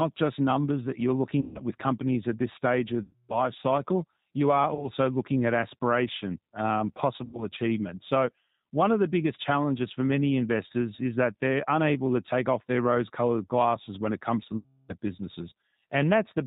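The speech sounds rough, slightly synthetic and muffled from start to finish, with nothing audible above 4 kHz. That is the G.729 codec, here the G.729A variant at 8 kbit/s. It discards the actual waveform and rebuilds each 10 ms frame from a vocal tract filter, a pitch predictor and a handful of pulses. At that bitrate the resynthesis is plainly audible as a coarse, synthetic texture.

Five times the sound turns into a stretched buzz or coloured noise that fades and stays weak for a moment afterwards: at 1.41 to 1.60 s, 3.03 to 3.41 s, 4.75 to 4.90 s, 7.25 to 7.44 s and 14.57 to 14.95 s. These are VoIP packet loss concealed by the speech codec. Gaps of 140, 260, 20, 80 and 320 ms went missing, and the decoder extended its last pitch and filter at falling gain. Each frame builds on the previous one, so the damage lingers past every gap.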